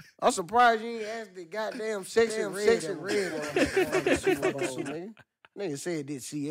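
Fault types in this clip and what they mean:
Doubled audio track: from 2.28 s to 4.92 s a second full-band copy of the sound runs about half a second behind, at roughly equal level and with no decay, likely from a duplicated capture path; on a waveform or spectrogram every event reappears shifted, starting and stopping abruptly.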